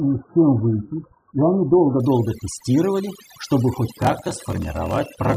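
From the first moment to the last, the background is pulled down to near silence and dotted with twinkling specks. That is overdone noise removal: a noise reducer set too hard keeps switching individual frequency bands far down or off whenever they sit close to its noise estimate, and the quieter parts of the voice are cut away along with the hiss.

For the opening 2.0 seconds the sound is also dull and muffled, with the treble missing and heavier codec smearing. At 2.0 s the clarity snaps up with no break. This is an adaptive stream starting at a low bitrate. The player began on a cheap version for a fast start, and the sound points to something near 8 kbit/s AAC. Once it had gauged the connection it switched to a much better rendition, nearer 96 kbit/s.

From 3.90 s to 5.37 s a low buzz at 41.7 Hz runs under the speech, which drags at 0.889 times normal speed while its pitch stays about where it was. 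This is a block size mismatch with padding. One stage hands over shorter blocks than the next stage expects, which fits 1024-sample writes, and the missing remainder of each block is filled with silence. These regular tiny gaps produce the buzz and stretch the timing.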